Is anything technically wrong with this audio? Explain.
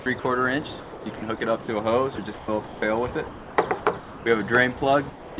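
Yes. The audio is repeatedly broken up, with real sound giving way to a flat synthetic hiss, and at the very end it drops out altogether.

Between 0 and 0.24 s, 0.8 and 1.68 s, 2.16 and 2.82 s, and 3.28 and 4.26 s, the sound turns choppy. Pieces vanish and a smooth, featureless noise briefly stands in: about 100 ms, 400 ms, 320 ms and 640 ms of fill respectively. This is likely sound chopped by the voice detector. The sender kept switching transmission off and on, and the receiver covered each gap with comfort noise.

From 5.1 to 5.38 s the sound disappears into about 280 ms of steady noise, losing about 270 ms of material. This fits sound dropped by the voice detector. The sender judged the quieter tail to be background and stopped sending, so the receiver supplied comfort noise instead. Nothing above 4 kHz is heard throughout, which points to a narrowband G.711 call codec.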